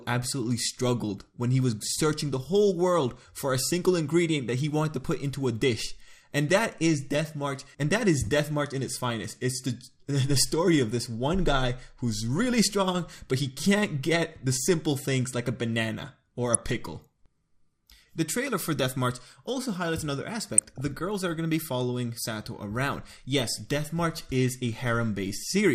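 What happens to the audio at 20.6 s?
From about 20.57 to 20.81 s you get a burst of DAB burbling, roughly a quarter of a second of short blips of noise in single sub-bands over the sound. Bit errors slipped past the error correction and corrupted samples in the audio data. The stretch sounds like about a dozen damaged frames, with an error rate somewhere around half a percent.

Underneath that, and across the whole clip, it's dull with a gurgling, granular edge, which is likely MP2 compression at a starved bitrate, something like an 80 kbps stream. Layer II divides the spectrum into 32 equal sub-bands and shares out bits among them. With this few bits to go round, the upper bands get switched off and flicker in and out, and whatever remains is quantised coarsely, which is where that grainy texture comes from.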